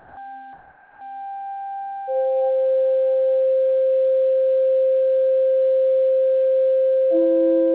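From 0.00 to 0.17 s and again from 0.53 to 1.01 s, the music's quiet background gives way to comfort noise, likely because the sender paused transmission and the receiver filled in a steady, featureless hiss. Unlike a gate or dropout, the gap isn't silent. The substitute runs about 6 dB and about 3 dB quieter, and like everything on this telephone-band path, it stops at 4 kHz.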